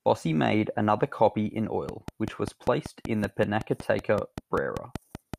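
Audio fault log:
1.89–5.35 s: train of clicks after "made another copy in", about 20 regular ticks at 5.2 per second, roughly 10 dB above the speech, likely interference or a faulty connection or power supply.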